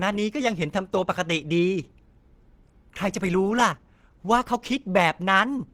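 A speech recording carrying plainly audible damage throughout that is likely Opus compression, with the hoarse, grainy texture pointing to the encoder's hybrid speech mode at a low rate around 16 kbps. Bands are kept filled rather than dropped, so the roughness comes without MP3-style swirling. On a spectrogram the upper bands look smeared and noise-like instead of holed, with content running up to about 20.3 kHz before a clean ceiling.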